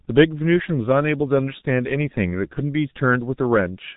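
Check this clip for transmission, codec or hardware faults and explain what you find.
One codec fault runs through the whole speech clip. G.723.1 codec, throughout: nothing above 3.8 kHz, and slow 30 ms model updates smear consonants into hoarse muffle, unlike plain low-pass filtering, which keeps voice texture intact.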